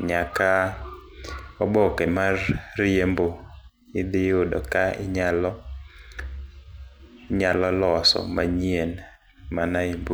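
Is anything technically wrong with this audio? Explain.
No, nothing technically wrong stood out on listening to this speech recording.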